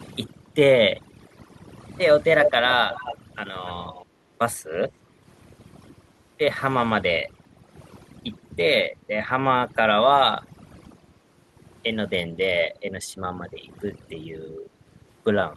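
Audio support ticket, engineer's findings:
Speech over a near-silent background with twinkling specks, throughout. Overdone noise removal: suppressor set too strong, cutting bands near its noise estimate along with quiet speech detail.

Delayed copy of the speech, 290 ms late, at 2.41–2.51, 2.67–2.73, 2.89–3.18 and 3.86–4.06 s, near speech level, then about 10 dB lower, then faint. Echo leak: likely residual from the far-end echo canceller.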